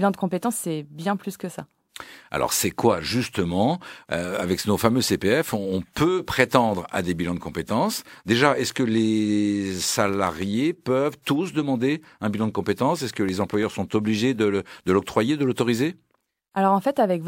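From 10.09 to 10.43 s, after "que les", and from 13.29 to 13.63 s, before "sont obligés de l'octroyer", the speech breaks into processor overload crackle. Very short buffers, under a millisecond each, miss their deadlines. Each becomes a hard-edged silent gap. Together they sound like gritty tearing.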